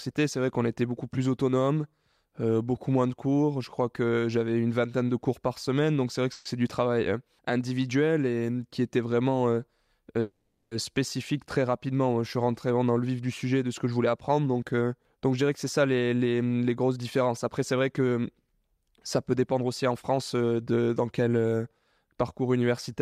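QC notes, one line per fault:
6.32–6.46 s and 10.20–10.72 s, call audio freeze: the last sound stretches into a fading buzz for 130 ms, then 510 ms, likely from delayed packets emptying the jitter buffer. The spectrogram shows smeared, flat bands; nothing is lost afterwards.
13.84–21.29 s, jitter buffer speed-up: the speech runs about 107% fast at unchanged pitch, with roughly half a second trimmed in pitch-period slices. Syllables crowd closer on the waveform while harmonic spacing stays put.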